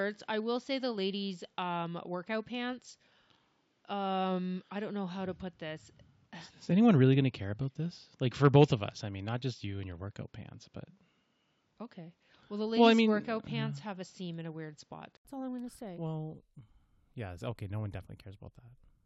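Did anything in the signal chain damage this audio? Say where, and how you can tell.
Yes. Input switched to a poorer device, at capture, from 0 to 15.25 s. The speech stops at 7.6 kHz over its own faint noise floor. An 80 ms gap before "all I'm going to" follows, then the band opens and level shifts about 5 dB, likely a narrower microphone or headset profile.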